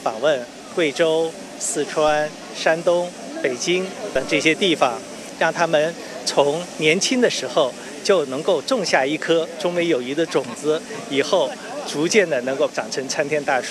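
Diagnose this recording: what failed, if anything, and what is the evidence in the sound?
The fault is a DC step at the converter, occurring at 2.08 s and again at 4.16 s. Each is heard as a low thump. On the waveform the zero line jumps by about −28 dBFS, then drifts back as a 2 Hz high-pass drains it. On a spectrogram each shows as a brief broadband vertical line.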